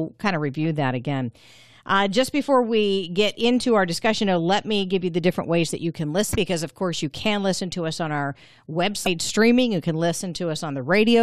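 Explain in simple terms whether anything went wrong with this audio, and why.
Yes, two short glitches. Both are damaged data in a compressed stream. At 6.31 to 6.36 s, between "ways that you can" and "because of course you", and again at 9.03 to 9.07 s, part of the stored file was wrong. The player misread it and had to find its place again.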